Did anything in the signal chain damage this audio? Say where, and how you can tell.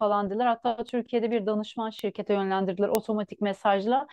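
Yes. Bit error spikes at 0.89, 1.99 and 2.95 s, peaking at about -26, -13 and -1 dBFS. Each is a single-sample or three-sample jump from a flipped bit in storage or a digital link, not a buffer dropout, which would leave a gap rather than one bare tick.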